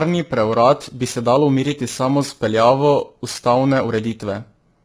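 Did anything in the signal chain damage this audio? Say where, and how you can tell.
Yes, at two stages. At the codec, the speech is rough and grainy from start to finish, with noise filling the gaps between pitch harmonics and nothing above 7.7 kHz. This is likely low-delay AAC compression (AAC-ELD). Its short frames resolve harmonics poorly, and the heavy damage fits a low bitrate around 16 kbps. A plain low-pass filter or a reduced sample rate would only dull the top band. It would not add this grain between the harmonics.

At the converter, periodic clock jitter gives the speech a metallic, rough edge throughout. The converter's clock is being shaken at a rate of around 3 kHz. That puts sidebands roughly 3 kHz above and below every component, and the higher components are hit harder. This edge disappears in the pauses, because sidebands exist only where there is signal to modulate. 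Their fixed spacing distinguishes them from frame-based coding noise.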